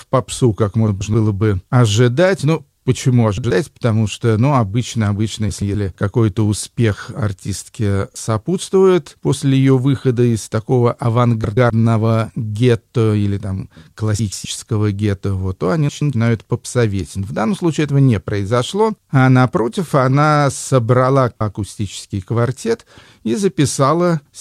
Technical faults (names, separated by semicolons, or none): frames out of order